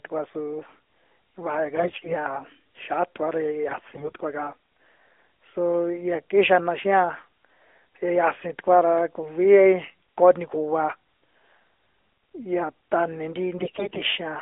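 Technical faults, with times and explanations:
1.76–2.16 s, 3.68–4.22 s (just after "ra ya") and 13.58–14.01 s: AMR bit errors, flipped weakly protected bits misplace excitation pulses and skew gain and spectrum, so pitch and level hold but the sound turns hoarse and gargly; spectrograms show smeared, noisy harmonics within the 300–3500 Hz narrowband line.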